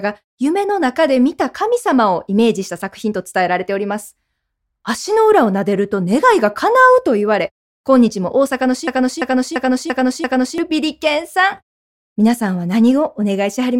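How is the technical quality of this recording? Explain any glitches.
The recording has one clear glitch. A system hang loop runs from 8.88 to 10.58 s: the system froze while playback kept cycling one 341 ms buffer, which fits a 16384-sample size. It repeats five times as a stuttering loop at about 2.9 Hz, and about a second and a half of audio is lost.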